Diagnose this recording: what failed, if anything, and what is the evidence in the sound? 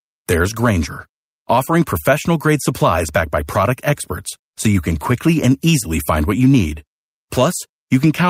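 No failure detected in this recording.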